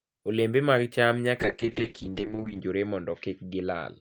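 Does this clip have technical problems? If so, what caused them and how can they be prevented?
Yes. From 1.42 s to the end of the clip, the speech turns muffled and rough, with a watery edge and no content above 8 kHz. This is a call bitrate drop: the connection's bandwidth estimate fell, so the encoder was pushed from 32 kbps down to 6 kbps, coding the speech far more coarsely and narrowing its range from 20 kHz to 8 kHz, with the lowest rate held for 1.22 s. A more stable network path with spare capacity, or a higher minimum bitrate in the call settings, prevents it.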